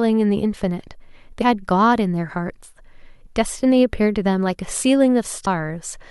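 A brief smeared blip at 1.41 s and 5.46 s marks compressed frames skipped. The speech jumps ahead about 70 ms and 100 ms respectively, which fits roughly three and four dropped 26.1 ms frames.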